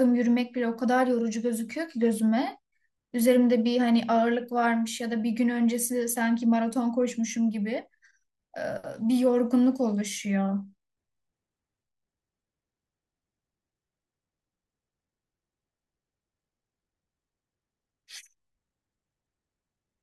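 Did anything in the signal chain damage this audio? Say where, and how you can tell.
No, nothing in the chain from capture through to playback has left a mark I can hear on this speech.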